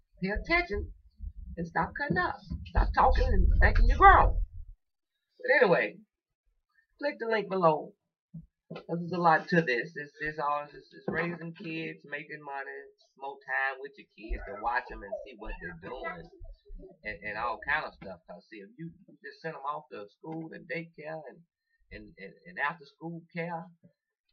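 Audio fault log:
9.81–10.67 s, zipper noise: a fast ticking, like a zip being drawn, rides on the sound as the level falls by roughly 10 dB over just under a second. The drop is not a continuous fade. The gain moves in 1 dB jumps, about ten per second, with no smoothing between them. Each jump puts a tiny discontinuity in the waveform, so every step clicks, and the string of clicks produces the zipping texture.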